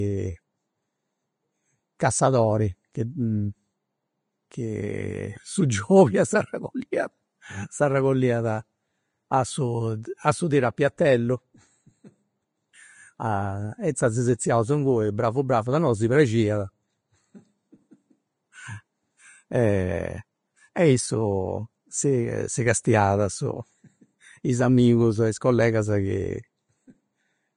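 Throughout, the speech sounds hissy and grainy, with smeared consonant onsets and nothing above 10.5 kHz. This is likely Vorbis compression at a low bitrate, around 30 kbps.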